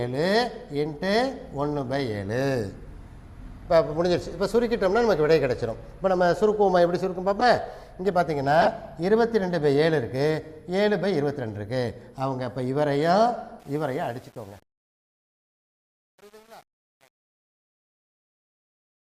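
A short squeaky blip at 7.39 to 7.45 s, then a louder, longer burst at 8.61 to 8.72 s, are corrupt frames decoded: damaged compressed frames were played anyway, so misread gains and codes threw energy to wrong frequencies for a few frames each time.

During the fade-out that begins near 13.6 s and runs to the end, the tail turns grainy from 13.6 s and, from about 13.9 s on, turns most gritty. That is truncation distortion on a fade: the undithered level stage, which fits an 8-bit word, reduces the quiet waveform to coarse steps.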